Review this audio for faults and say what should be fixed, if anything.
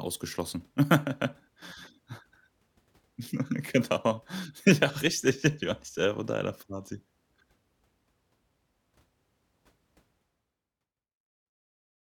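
Nothing needs fixing; no audible faults in this speech.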